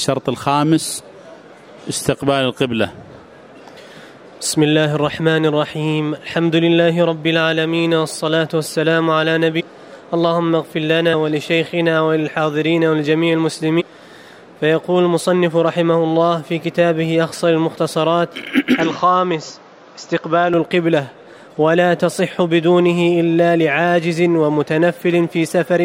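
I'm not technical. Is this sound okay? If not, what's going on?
No. There is damaged data in a compressed stream at 9.59 to 9.61 s, 11.12 s and 13.79 to 13.82 s. Each is a brief blip or chirp: the player hits corrupted bits, loses its place, and skips ahead to the next readable chunk.

From 18.80 to 20.54 s the sound turns duller, with nothing above 7.4 kHz and a faint new background hiss, though the loudness holds steady and there is no gap. This is likely the input switched to a poorer device, one with a narrower range.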